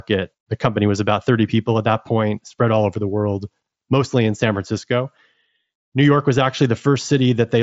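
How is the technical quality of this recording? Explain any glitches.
Nothing stood out on listening to this speech recording, which comes through a Bluetooth mSBC headset link with its content ending a little below 8 kHz.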